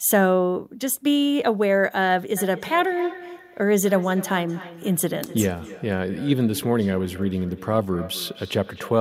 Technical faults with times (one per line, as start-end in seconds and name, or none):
2.37-9.00 feedback echo between two devices